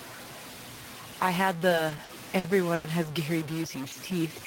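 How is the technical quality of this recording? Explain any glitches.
The recording has three audible problems: a distortion that runs the whole way through, a stuttering stretch in the middle, and a slowed ending.

Throughout the speech there is a distortion, and the pauses are filled with noise rather than silence. The likely cause is a stuck bit, one data bit held at a fixed value, so about half the samples are pushed off by that bit's weight and even quiet passages flip around it.

From 1.69 to 2.87 s the speech drags and stutters in repeated stalls. Packets arrived late, so the jitter buffer emptied seven times and the receiver stretched the last sound to fill about 250 ms in total. That concealment covers about 21% of this stretch, the longest fill is 100 ms, and nothing is lost.

From 3.82 s to the end the speech runs slower, at about 89% speed, with drawn-out sounds but unchanged pitch. 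This is a jitter buffer slow-down: to rebuild its reserve, the receiver repeated single pitch periods and added about 81 ms.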